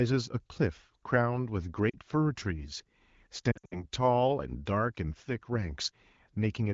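Lost AMR speech frames at 1.89–1.96 s and 3.51–3.85 s: the wideband decoder repeated its last good pitch and vocal tract settings at falling gain. The first is brief, fitting two lost frames. The second scatters dips over about 0.2 s, with the longest gap lasting 60 ms.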